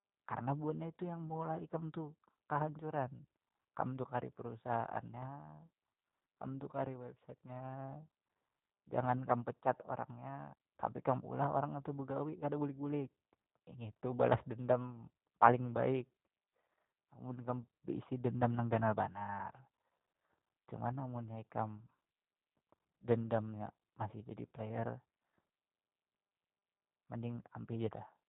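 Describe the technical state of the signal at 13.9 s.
At 13.9 s the speech has been through the G.729 codec, as it has for the whole clip: each 10 ms frame is rebuilt from a vocal tract filter, pitch predictor and a few pulses, with nothing above 4 kHz. The result is plainly rough, synthetic and muffled, consistent with an 8 kbit/s link.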